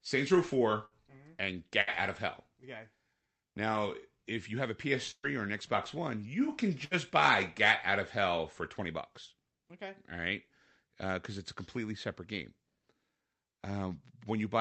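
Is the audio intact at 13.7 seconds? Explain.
Yes, the audio is intact at 13.7 seconds, with the speech carried cleanly through the call path and its codec.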